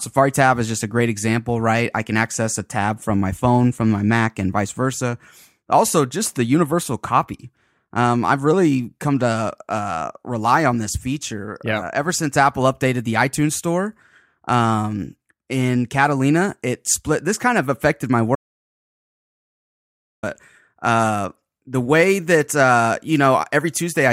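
The input feeding this speech recording likely dropped out, through a lost device connection, a broken link or an accidental mute, while the recorder kept writing silence. The result is an audio dropout to silence from 18.35 to 20.23 s: the speech cuts off abruptly, about 1.9 s of silence follows with no room tone underneath, and the speech resumes mid-flow, so whatever was said in that stretch is missing.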